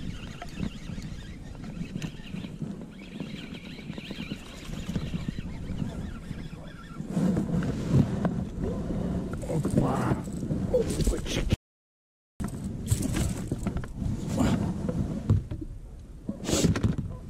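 At 11.54 s the sound cuts out to dead silence until 12.4 s, an audio dropout to silence, most likely from a momentary loss of the input signal.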